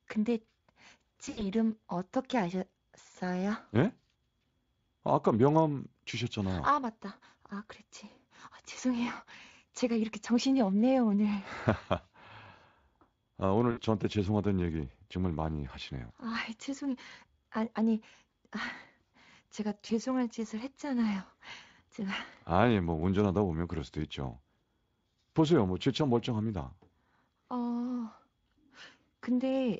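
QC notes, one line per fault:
1.25 to 1.47 s, VoIP packet loss concealed by the speech codec: around 120 ms of packets went missing in bursts spread over about 160 ms, the longest gap 80 ms, so the decoder stretched its last pitch and filter into a fading buzzy tone or coloured noise.
13.71 to 13.81 s, VoIP packet loss concealed by the speech codec: about 60 ms lost, bridged by a short extrapolation, with weak or distorted speech just after.
19.87 s, VoIP packet loss concealed by the speech codec: a single brief gap of about 20 ms, patched over by the same extrapolation.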